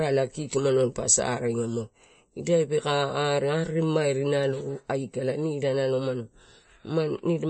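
Throughout the speech, the sound is watery and swirly, with s sounds turning metallic and nothing above about 8.3 kHz. This is likely MP3 compression starved of bits, which fits a bitrate near 33 kbps: the encoder drops the treble and lets weak frequency lines flicker between frames.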